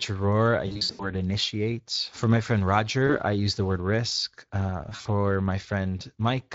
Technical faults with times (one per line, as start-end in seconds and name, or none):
0.00-6.55 Speex codec
0.67-1.11 VoIP packet loss concealed by the speech codec
3.07-3.18 VoIP packet loss concealed by the speech codec
4.89-5.07 VoIP packet loss concealed by the speech codec